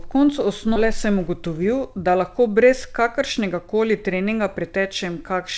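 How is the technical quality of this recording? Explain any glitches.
The speech has two timing glitches in the call path, heard through G.722's band-limited sound that stops at 8 kHz.

Skip ahead, 0.76 to 0.78 s: about 0.7 s of audio was dropped while later audio was already waiting, so playback jumps forward with almost no gap, a chunk simply missing.

Jitter buffer speed-up, 0.85 to 4.85 s: with audio piling up, tiny pitch-period slices get trimmed repeatedly, about a third of a second overall, so speech runs 6% fast, slightly rushed, pitch unchanged.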